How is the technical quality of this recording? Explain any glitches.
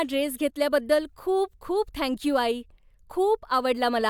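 No technical glitches can be heard anywhere in the recording; the signal stays continuous and stable throughout.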